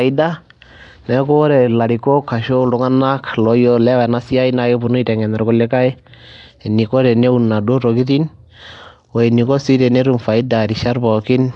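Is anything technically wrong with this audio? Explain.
Yes. Throughout, the speech has a rough, hissy halo and a smeared, underwater quality, likely from Nellymoser compression. Its coarse fixed-bit block coding starves weak bands and fills them with noise, and nothing remains above 10.6 kHz.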